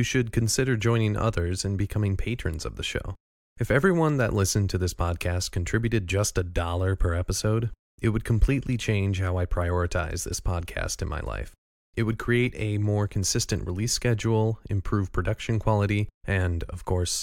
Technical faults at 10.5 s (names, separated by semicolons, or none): none